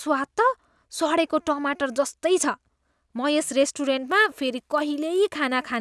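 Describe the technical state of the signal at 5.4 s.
At 5.4 s the speech carries a resampler restarted on every block, running from 4.08 s to the end of the clip. The 48 kHz to 24 kHz conversion is done on 20 ms blocks in isolation, so each block edge lacks its true neighbouring samples and picks up a small error. These errors repeat at 50 Hz as a buzz. Unlike mains hum at the same rate, it stops in pauses because it exists only with signal.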